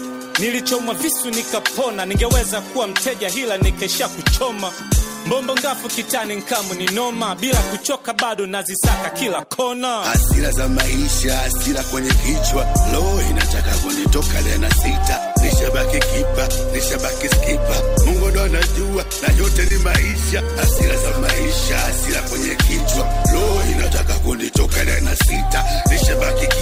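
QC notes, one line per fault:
19.68–19.72 s and 20.10–20.15 s, short stall from a late packet: two brief holds, the first stretched by about 20 ms and the second by 30 ms, each with a slight buzzy or dipped quality where the held sound is extended. Both times a packet missed its playout slot and the jitter buffer ran dry. The receiver sustained the last sound until the packet arrived, then resumed from the same point. No audio is lost, but playback ends up 50 ms behind.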